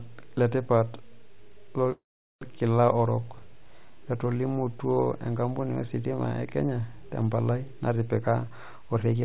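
A speech recording carried over a narrowband call path, with nothing above 4 kHz on the spectrogram, which points to G.711 mu-law. From 1.92 to 2.44 s there is a call audio freeze, most likely from packets held up in transit until the jitter buffer ran dry. The last sound is stretched briefly, then about 410 ms of the 492 ms gap is silent. The waveform shows a flat stretch, and the spectrogram shows a smeared tail followed by an empty band. No speech is lost; everything after arrives half a second late. From 8.43 to 9.22 s a jitter buffer speed-up plays the audio at about 110% speed while keeping the pitch unchanged. Roughly a tenth of a second is cut out in short pitch-period slices. The harmonics keep their spacing on the spectrogram while syllables crowd closer together in the waveform, so the speech sounds hurried.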